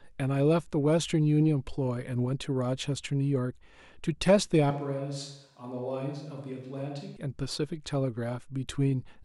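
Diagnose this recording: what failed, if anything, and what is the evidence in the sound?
Analogue capture: between 4.71 and 7.16 s the speech abruptly goes hollow, thin and about 10 dB quieter, likely a switch to a distant microphone.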